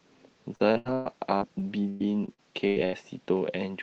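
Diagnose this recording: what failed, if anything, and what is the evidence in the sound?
From 0.55 to 2.95 s the speech turns choppy and robotic, with eleven short holes, the longest 120 ms, each bridged by stretching the preceding sound. This is repeated packet loss on the network, masked by the call decoder's concealment.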